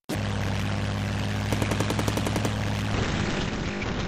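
At 2.95 s a call bitrate drop begins and lasts to the end. The bandwidth estimate fell, starving the encoder of bits. This fits a fall from about 96 to 6 kbps. Bandwidth shrinks from 20 kHz to 8 kHz. The sound turns muffled and rough.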